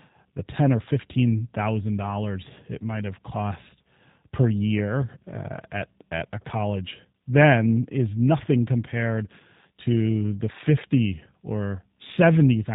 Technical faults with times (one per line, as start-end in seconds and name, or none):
0.00-12.75 G.729 codec